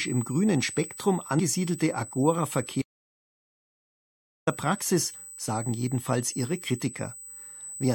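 A speech recording carrying USB whine throughout: a steady 8 kHz tone roughly 15 dB below the speech, drawn as a unbroken horizontal line across the spectrogram. Between 1.38 and 1.40 s, damaged data in the compressed stream makes a short disruption, seen as a brief smeared vertical blot. From 2.82 to 4.47 s an audio dropout to silence cuts about 1.65 s to silence with no room tone, a flat line on the waveform, likely from a lost input or link.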